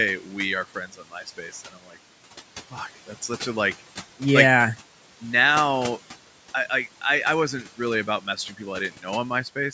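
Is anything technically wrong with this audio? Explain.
Yes. Noise suppressor artifacts run through the whole speech clip. The suppressor pulls down bands it judges to be steady noise by about 12 dB, frame by frame. The room noise therefore dips between phrases and swells back under speech.

Speech is cut by the noise suppressor at 0.92 to 1.14 s, dropping by about 11 dB, and at 1.73 to 1.97 s, by about 9 dB. Roughly a tenth of a second of speech in each is mistaken for noise and attenuated, so those sounds come across swallowed and faint.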